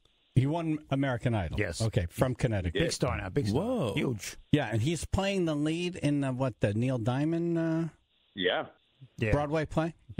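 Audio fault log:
No fault was found in this clip.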